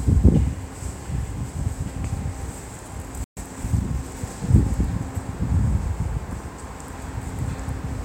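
At 3.24 s the sound cuts out abruptly and stays silent until 3.37 s, a playback stall of about 126 ms. The gap is likely the player running dry of data or having its output thread blocked, so nothing reached the output until it recovered. On a waveform this is a flat line between two hard edges. A spectrogram shows a clean vertical band of empty time across all frequencies, with no fade on either side.

From 3.37 s to 4.19 s the player works off the backlog with time-compressed catch-up, running about 1.15 times faster while holding the original pitch. It does this by dropping short segments and cross-fading across the joins, so the sound comes across as hurried. A spectrogram shows events packed closer together with their frequencies unchanged.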